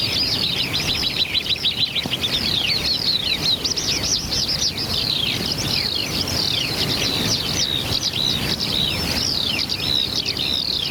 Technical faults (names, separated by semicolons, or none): gain pumping